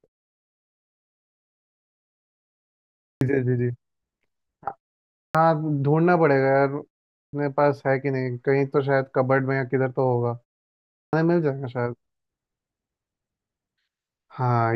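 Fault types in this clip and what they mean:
Clipped start after a pause: the output wakes late after silence, so each resumption loses its first 0.19 to 0.21 s, unlike muted pauses, where nothing is lost.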